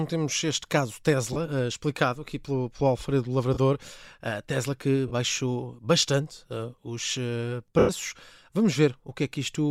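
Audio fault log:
1.33–1.37 s, 3.54–3.58 s, 5.08–5.12 s: lost LE Audio frames. Each gap lasts 30 ms, which fits three 10 ms frames. The decoder repeats the last spectrum with random phase signs. The speech briefly turns into a rough, noisy smear.
7.79–7.89 s: lost LE Audio frames. This gap lasts 100 ms, which fits about ten frames. The concealment smear fades steadily after the first few frames and dies away toward silence before the speech returns.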